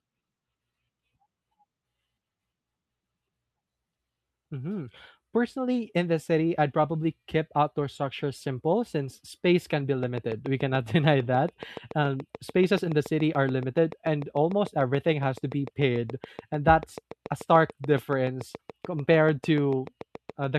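Speech clip with a train of clicks from 10.03 s, just after "since space can be", to the end: evenly spaced, near-identical ticks about seven per second, slightly louder than the speech and continuing through pauses. Their steady rhythm separates them from random crackle; likely interference or a faulty connection.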